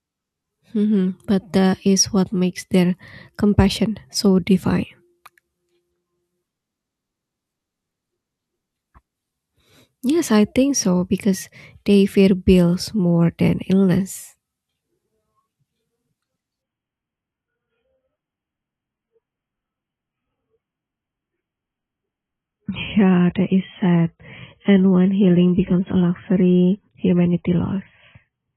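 At 16.62 s the audio switches abruptly, with no gap, to an adaptive stream at a lower bitrate, likely because the connection slowed. Until the end, nothing remains above 3.8 kHz and artefacts thicken, which fits a drop from about 96 to 16 kbit/s AAC.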